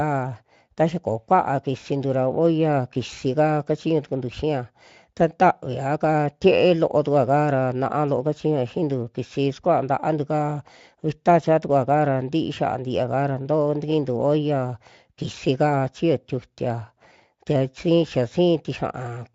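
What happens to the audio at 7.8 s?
Nothing goes wrong at 7.8 s: the speech comes through intact, with only the light Speex coding it carries throughout.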